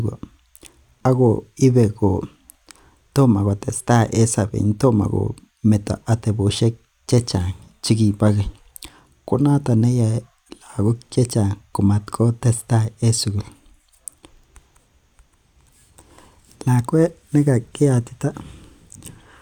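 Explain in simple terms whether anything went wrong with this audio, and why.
Nothing went wrong here: the signal stays steady and intact the whole way, with no technical faults to be heard anywhere in the speech.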